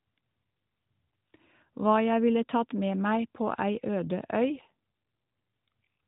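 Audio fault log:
4.47–4.72 s, AMR rate drop: for a quarter second the speech turns rougher, buzzier and more synthetic, with no gap and the same narrow band. This fits the mobile codec stepping down from about 12.2 kbps to about 5.9 kbps, diverting bits to error protection.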